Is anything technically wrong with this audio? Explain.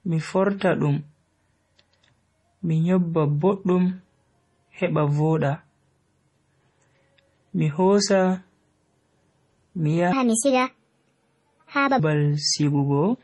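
Yes. The speech has two faults.

Throughout, the audio has heavy MP3 compression damage. The sound is watery and swirling, with attacks smeared, which points to a low bitrate around 32 kbps. The encoder likely starved for bits, cut everything above 11.4 kHz and dropped weak frequency lines. A spectrogram shows a flat ceiling at 11.4 kHz with flickering holes beneath it.

From 10.13 to 11.99 s, a section plays at the wrong speed, 1.53 times too fast. Pitch rises about seven semitones and the speech sounds hurried and chipmunk-like, likely from playback against the wrong clock. On a spectrogram the harmonics jump upward and spread apart. The waveform's syllables are packed closer together.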